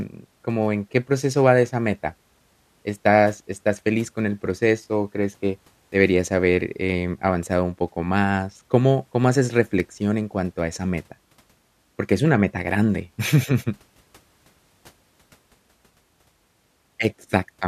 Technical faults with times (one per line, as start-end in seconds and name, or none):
none